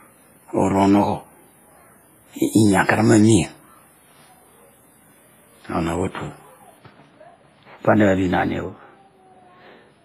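A speech clip with heavy transform-codec damage throughout, likely from WMA compression. Quantisation noise smears over tens of milliseconds, giving a ringing, washy sound with hiss that breathes with the speech. Nothing remains above 15.4 kHz, which fits a low bitrate near 24 kbps. From 6.78 s to the end, de-emphasis is applied wrongly. A treble cut meant to undo pre-emphasis was used where none existed, or was applied twice. The top slopes away smoothly, about 14 dB down at 10 kHz against 1 kHz, so the speech turns dull and muffled.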